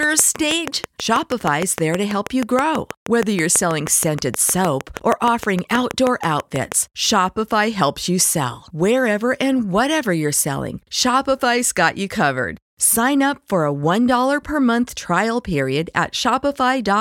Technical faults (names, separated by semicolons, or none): train of clicks